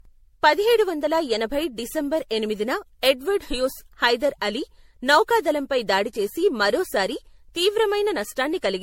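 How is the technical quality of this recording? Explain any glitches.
The speech is degraded by generation loss throughout. It sounds swirly, smeared and hollow, with blurred attacks and nothing above 16.5 kHz, likely from being re-encoded around seven times with a low-bitrate MP3-style codec that re-quantises on shifting frame grids each pass.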